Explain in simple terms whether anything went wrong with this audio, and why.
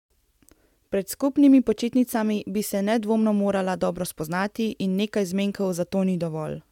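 Nothing went wrong with this audio, as no technical fault can be heard anywhere in it.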